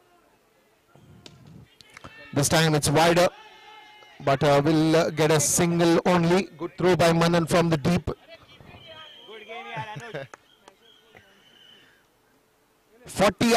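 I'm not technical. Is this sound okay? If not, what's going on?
Yes, nothing in this sound points to a technical fault.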